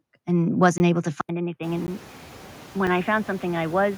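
Across the whole clip there are noise suppressor artifacts, though they're faint. The suppressor is only taking about 1 dB off the bands it treats as steady noise, so you get a slight dip in the background between phrases and a small lift again under the speech. It's a gentle frame-by-frame pumping of the noise floor rather than anything you'd call watery.

At 0.78 s there's a block of digital silence lasting 20 ms. A chunk of samples was zeroed, most likely because the output buffer wasn't filled in time. Since the audio drops straight to nothing and comes back with no fade, you hear a short hole.

From 1.21 s to the end, the input seems to have switched to a poorer device. There's an 80 ms silence at the switch. After it, the band narrows, so the speech goes dull and boxy, and the level drops by roughly 5 dB. A new noise floor also appears, roughly 40 dB below the signal. The sudden change in band and tone likely comes from a move to another microphone or a headset's call profile.

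Two more blocks of digital silence land at 1.87 s (15 ms) and 2.87 s (5 ms). The first is heard as a tiny gap, while the second is so short it comes across as a single tick. Around 1.5 s the room noise swells by about 25 dB, which is the room itself and not the system. It ends up sitting about 19 dB under the speech.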